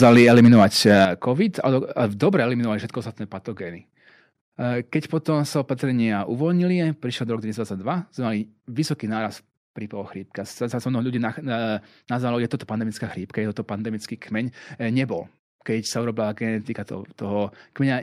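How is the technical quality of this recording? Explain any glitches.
The recording has two faults, both in the first couple of seconds: clipped, distorted peaks at the start and several sudden drops in level.

Microphone overload runs from 0.02 to 1.05 s, likely from input gain set too high. Peaks exceed the converter's limit by about 7 dB and a few percent of samples are flattened, giving a harsh crackle. The sound itself is distorted, not just louder.

Microphone volume stepped down three times: at 0.04 s by about 3 dB, at 1.05 s by about 8 dB as the clipping ends, and at 2.07 s by about 2 dB just before "dobre eliminovali". Voice and background drop together in a single step, unlike a fade or distortion.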